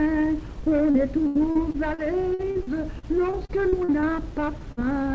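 The audio passes through a call path with nothing above 8 kHz, which fits a wideband codec such as G.722. From 0.60 s to 4.06 s there is repeated packet loss, giving a choppy, robotic sound. Around seventeen short holes occur, the longest 80 ms. Each is patched by stretching the last sound, and about 16 percent of this stretch is concealed that way. From 3.81 s to 4.92 s a jitter buffer slow-down sets in. The receiver repeats tiny pitch periods to rebuild its reserve. Playback runs at about 94 percent speed, with pitch unchanged. This adds 67 ms and draws sounds out. Inside that stretch, from 4.72 s to 4.80 s, comes a burst of packet loss. The last sound is held and faded for about 50 ms. Then roughly 40 ms of audio is simply missing before playback resumes.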